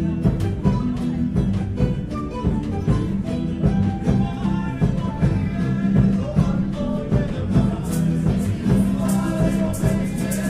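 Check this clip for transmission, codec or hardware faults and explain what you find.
Nothing audible here points to a transmission, codec or hardware fault in the audio.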